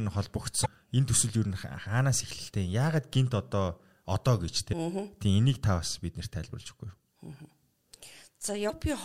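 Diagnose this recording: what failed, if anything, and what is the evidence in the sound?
Damaged data in a compressed stream (codec stage): the decoder loses sync, causing 45 ms speech blips at 0.62, 4.69 and 8.66 s.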